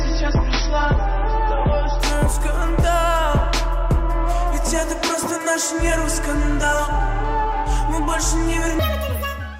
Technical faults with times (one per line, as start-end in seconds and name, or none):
0.00-2.00 adaptive stream starting at a low bitrate
8.79-9.60 section at the wrong speed